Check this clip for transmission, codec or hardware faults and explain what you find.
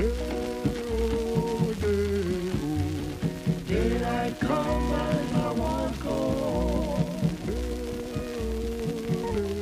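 No transmission, codec or hardware faults can be heard here.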